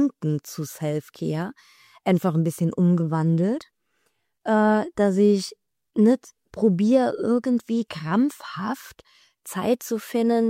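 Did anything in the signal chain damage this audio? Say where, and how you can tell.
No, nothing damaged it.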